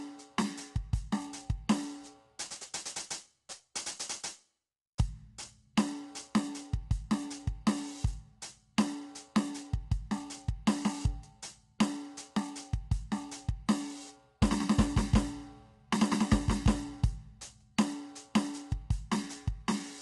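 Across this music clip the sound is grainy and rough, with a noisy haze between the harmonics and nothing above 11.6 kHz, from start to finish. The likely cause is low-delay AAC compression, whose short frames resolve harmonics poorly, at a bitrate around 32 kbps.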